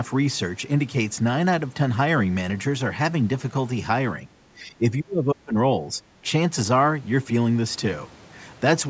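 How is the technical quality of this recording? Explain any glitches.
One glitch stands out in this call-processed speech, which carries nothing above 8 kHz. From 4.55 to 5.55 s the speech drops sharply, by roughly 25 dB at its deepest, and stays turned down for most of that second. This is likely speech suppressed in double talk: an echo canceller, hearing both ends at once, treated the talker as echo and attenuated it.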